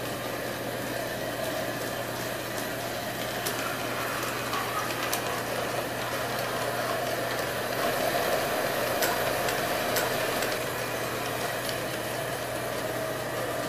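From 7.78 to 10.58 s a second full copy of the sound runs about a second behind the first, at about the same loudness, with no decay or room colour, starting and stopping abruptly. This doubled audio track likely comes from a slower second capture path.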